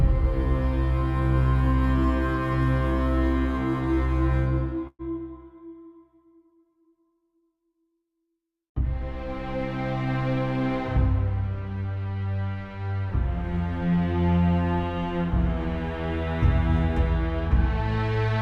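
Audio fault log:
4.87–5.02 s: burst of packet loss; about 120 ms missing, the last sound extended and faded for about 114 ms, then about 30 ms of silence before playback resumes.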